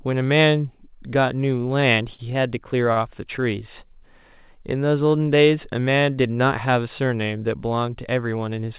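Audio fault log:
2.14–2.21 s and 2.93–2.98 s: short stall from a late packet, twice. Each time a packet arrived late and the jitter buffer ran dry. The receiver held the last bit of speech, about 46 ms the first time and 35 ms the second, until the packet came in. It then picked up where it had stopped. No speech is lost, but the held sound drags a little, with a faint buzz or dip, and playback ends up slightly later each time.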